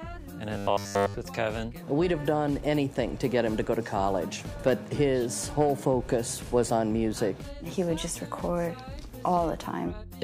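From 0.55 to 1.14 s, new audio likely stopped arriving in time, so roughly every stretch was filled by replaying the last 10 ms buffer. This is robotic sound from repeated short buffers: a rigid, metallic 100 Hz buzz that follows the original only roughly.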